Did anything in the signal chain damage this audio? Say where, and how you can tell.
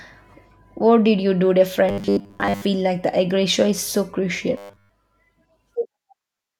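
Yes. The speech turns robotic twice, from 1.89 to 2.65 s and again from 4.57 to 4.89 s, a sign of robotic sound from repeated short buffers, likely at the driver or buffer stage. Both passages carry a rigid, metallic buzz at 100 Hz, which points to a 10 ms block being replayed. The first stretch is mostly repeated material, and the second is repeated throughout. When fresh audio fails to arrive in time, the last block is looped while real audio is skipped.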